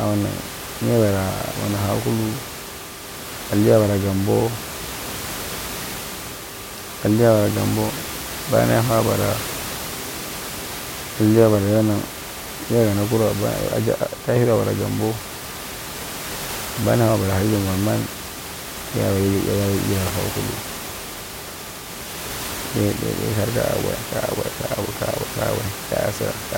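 There are no technical faults to describe in this speech clip.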